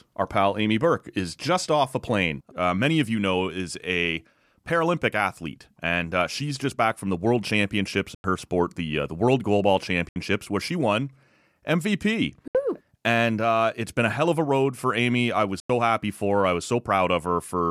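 Four short silences at 8.15, 10.09, 12.48 and 15.60 s, each 70 to 93 ms and before "sport the uh the", "where she won" and "happy for her I", are likely Bluetooth dropouts from late packets, showing as blank vertical gaps in the waveform and spectrogram.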